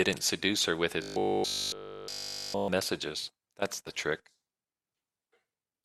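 From about 1.02 s to 2.68 s the speech collapses into robotic sound from repeated short buffers: a stiff, metallic buzz pinned at 50 Hz that only loosely tracks the talking. That's likely a playback starved of fresh audio, looping the last chunk over and over while the real signal gets dropped. Here it's essentially all repeats for that stretch, and the 50 Hz drone fits a loop around 20 ms long.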